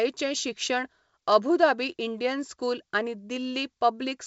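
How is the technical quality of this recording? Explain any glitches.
No glitches: the speech comes over G.722 wideband telephone coding at 64 kbit/s, bandwidth topping out around 7 kHz, with at most a faint trace of the codec in the upper band.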